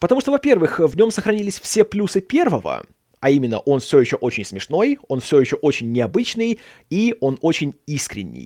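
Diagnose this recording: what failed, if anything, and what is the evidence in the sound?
At about 0.91 s, just before "нем сохранились все плюсы", the speech turns briefly rough and grainy for roughly 20 ms, with no dropout or silence. This is a network fault: a lost packet rebuilt from error correction. The packet carrying that moment never arrived, but the one after it held a low-bitrate spare copy (Opus in-band forward error correction), which the decoder played in its place. The duration fits a single lost 20 ms packet.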